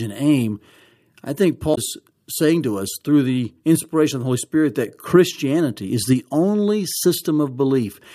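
Speech clip with damaged data in a compressed stream at 1.71 to 1.78 s: corrupted frames make the decoder lose sync, producing a brief glitch.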